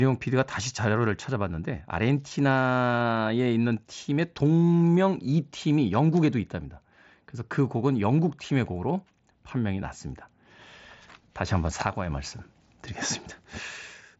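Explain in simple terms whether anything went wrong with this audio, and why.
Nothing went wrong with this audio; it is speech sent over a Bluetooth headset connection, which carries only the lower part of the sound range, and that is simply how such a link normally behaves.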